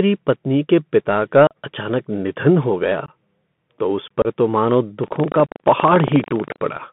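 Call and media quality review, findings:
Bluetooth CVSD headset codec, whole clip: band limited to about 150 Hz to 3.5 kHz, with scratchy sibilants, slope-overload grit on loud high-frequency speech and granular hiss under the speech. Consistent with a 64 kbps CVSD link. Spectrogram shows a hard ceiling near 3.5 kHz and a speckled noise floor. Waveform shows fine stepped texture.

Unconcealed Bluetooth headset packet loss, four dropouts: 1.47–1.56 s, between "पत्नी के पिता का" and "अचानक निधन हो गया" (about 37.5 ms lost); 3.06–3.09 s, just after "अचानक निधन हो गया"; 4.22–4.27 s; 5.46–5.50 s. Several lost packets each time, filled with silence or an idle pattern, not concealed. Waveform shows flat gaps with hard edges. Spectrogram shows vertical blank stripes.

Buffer tearing, 5.0–6.59 s: robotic 25 Hz buzz, present only under signal. Writer and reader pointers cross each period, so a small slice of each buffer replays audio about 100 ms old. 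The 40 ms period fits a 40 ms buffer. Waveform shows regular splice discontinuities every 40 ms. Spectrogram shows vertical striations at 25 Hz spacing.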